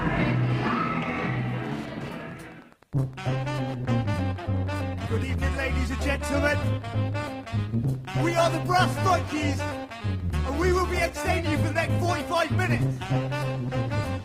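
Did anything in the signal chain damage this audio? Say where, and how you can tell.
Yes. Wi-Fi interference runs through the whole clip in the analogue wiring stage. A steady tick sits under the sound about ten times a second, at roughly 25 dB below the signal. That spacing matches a 102.4 ms beacon interval. A nearby Wi-Fi radio is coupling its transmissions into the audio circuit, and a nonlinear junction there demodulates each beacon into an audible click.

At 2.70 s, the adaptive stream drops to a lower bitrate at the network and codec stage, and it stays degraded until the end. The change is abrupt but gapless. Codec artefacts rise, which fits a switch from about 64 kbit/s to 16 kbit/s Opus. The player kept playing without a break by moving to a cheaper encoding of the same stream when the connection slowed.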